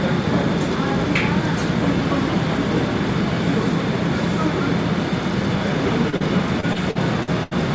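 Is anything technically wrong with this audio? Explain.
Yes, there are two kinds of fault. They come through a call path whose spectrum stops at 8 kHz, consistent with a wideband G.722 link.

Short concealed packet loss occurs twice, at 6.10–6.14 s and at 6.16–6.22 s, covering roughly 20 ms and 40 ms. Audio arrived too late, so the receiver extended the preceding sound and faded back. Each one is heard as a quick smear or wobble. On a spectrogram it shows as a brief stretch of frozen, smoothed harmonics or noise.

Repeated packet loss, heard as robotic sound, runs from 6.60 to 7.53 s. Five separate gaps are patched there, the longest 78 ms, so about a quarter of the span is synthesized. The repeated extrapolation makes the sound choppy, with pieces missing. A waveform shows uneven dips and blended joins, and a spectrogram shows repeated blurred, stuttering blocks.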